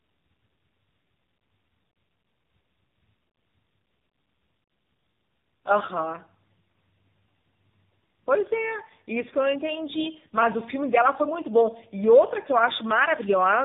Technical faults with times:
0.00-13.65 tandem speech coding

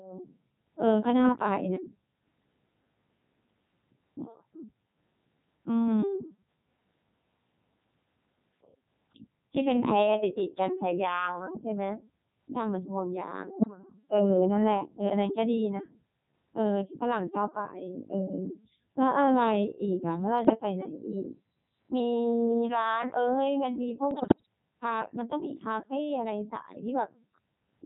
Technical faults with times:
0.00-27.85 Codec 2 vocoder
10.68-11.96 drift correction step
13.57-13.67 bit errors on digital voice radio
20.45-20.55 bit errors on digital voice radio
20.97-22.00 drift correction step
24.11-24.46 bit errors on digital voice radio

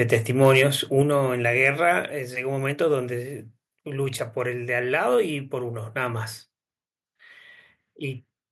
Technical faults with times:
0.13 microphone overload
0.41-0.62 microphone overload
1.02 microphone volume stepped down
1.65-1.68 microphone overload

